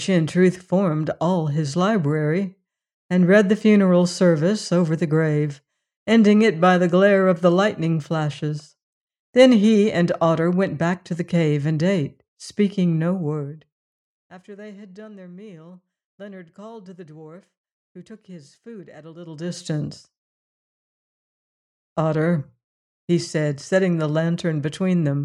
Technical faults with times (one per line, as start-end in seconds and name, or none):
none